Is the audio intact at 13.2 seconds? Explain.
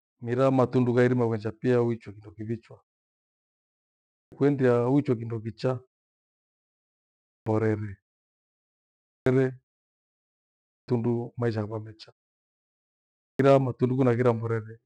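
No. At 13.2 seconds the speech is missing, because of a clipped start after a pause. After about 0.74 s of silence, the output device had gone idle and needed time to wake and lock again. About 613 ms of sound, from 12.78 to 13.39 s, never came out. Speech then resumes abruptly out of silence, with its opening sounds cut away.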